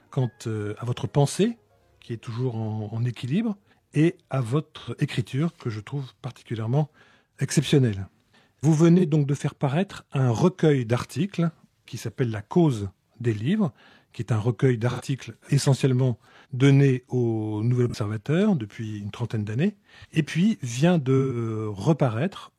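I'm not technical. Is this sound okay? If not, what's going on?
No. There are five brief smeared, noisy blips, at 4.79–4.90 s, 8.97–9.03 s, 14.90–15.01 s, 17.89–17.94 s and 21.17–21.36 s, each lasting roughly 40 to 130 milliseconds. This is AAC frame loss with concealment: small chunks of the compressed audio went missing, and the player covered each gap by guessing from the sound just before it. That guess is what produces the smeared patches.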